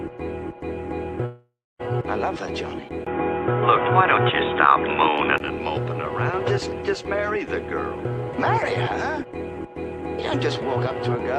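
From 1.25 s to 1.81 s, the incoming stream stalls, likely a long network dropout. About 540 ms of audio never arrives. The receiver covers the hole by carrying the last sound on as a fading buzz or hiss, which thins to roughly 270 ms of silence before the stream resumes. The lost material is simply skipped, so what follows jumps ahead rather than picking up where it stopped.

At 3.05 s, the recording path changes source, likely an input switched to a poorer device, with a 20 ms silence marking the switch. The new input passes nothing above 3.8 kHz, so the top of the spectrum disappears and the sound turns narrower and duller. The level shifts by about 5 dB, and a new noise floor sits around 50 dB below the signal. At 5.40 s the original input returns and the fuller band comes back.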